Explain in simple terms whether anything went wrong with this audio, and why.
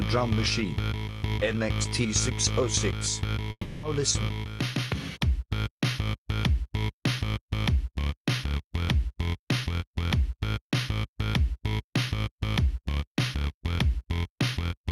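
The audio stream was most likely cut off by a long network dropout, so for a moment nothing reached the player. From 3.51 to 3.85 s, the receiver carries the last bit of sound forward for about 320 ms as a buzz or hiss that fades away, followed by roughly 50 ms of silence. The audio then resumes, but about 320 ms of the original sound never arrived and is simply gone.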